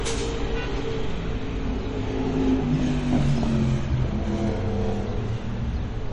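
Sounds, with plainly audible MP3 compression throughout, likely from low-bitrate encoding around 40 kbps. Unlike a simple low-pass filter's steady dullness, the damage here shifts frame by frame, with weak frequency lines flickering on and off into a watery, swirling texture.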